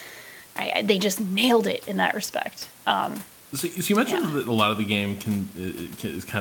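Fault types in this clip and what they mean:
No technical faults are present in the signal, and the only background is the ambient sound of the room itself, sitting about 26 dB below the speech.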